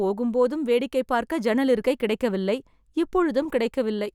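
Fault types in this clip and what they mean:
No technical fault can be heard anywhere in this speech clip. There is nothing here to list.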